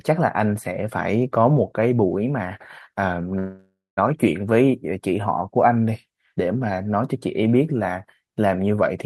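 From 3.38 to 3.99 s a call audio freeze, likely caused by delayed packets emptying the jitter buffer, stretches the last sound into a fading buzz and then 200 ms of silence. Speech resumes intact but 586 ms late. A spectrogram shows smeared flat bands fading to blank, and the waveform shows decaying repetition, then a flat line.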